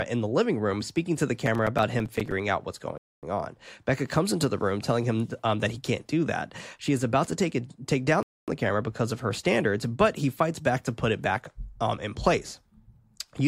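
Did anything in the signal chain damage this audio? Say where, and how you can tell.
Yes, in three places. From 1.46 to 2.32 s, just after "room speaking to the" and before "out what's", the speech is covered by a gritty crackle: a rapid run of tiny hard-edged dropouts that chops the sound into fragments, then stops. This is processor overload crackle at the driver or buffer stage. The audio engine repeatedly missed its deadlines for very short buffers, a few milliseconds each, about twenty times in a row, and each missed buffer came out as a sliver of silence.

At 2.98 to 3.23 s, right after "out what's", and again at 8.23 to 8.48 s, between "take down" and "the camera because of", the audio stops dead for 250 ms and then resumes cleanly, with no content lost. The two holes are 5.25 seconds apart, 5 seconds of audio plus the 250 ms hole, which identifies them as gaps between chunks. This points to storage or playback handling the audio in 5-second segments and inserting silence at each join.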